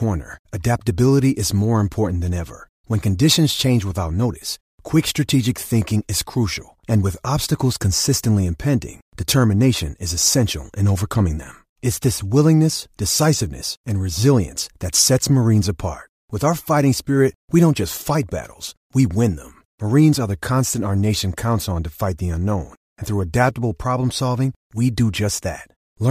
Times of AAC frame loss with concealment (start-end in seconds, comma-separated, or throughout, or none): none